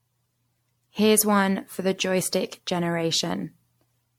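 Generation loss runs through the whole speech recording. It is likely the result of repeated MP3 encoding, with the sound decoded and re-encoded around fifteen times at settings that point to 96 kbit/s. Each pass quantises on a shifted frame grid, so errors and spectral gaps pile up rather than staying fixed. The speech sounds swirly and hollow, consonant attacks smear, and nothing survives above 19.8 kHz.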